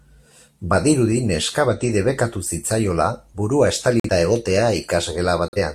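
At 1.81 s there is a corrupt frame that was decoded anyway. It lasts only a moment. Flipped bits inside the compressed data gave the decoder wrong gains or misread codes. It then put energy at frequencies where none belonged. The result is a short, fairly quiet blip, with the error peaking around -35 dBFS. Its span points to a few damaged frames.

At 4.00 s a corrupt frame was muted. The decoder rejected the damaged data and the player filled the gap with silence. The hole starts abruptly and lasts about 0.1 s, which fits a single lost frame. A second muted stretch begins at 5.48 s and ends at 5.58 s. It is again a sudden drop-out of about 0.1 s, pointing to a short run of refused frames. Timing is kept in both, so what follows each gap stays on schedule.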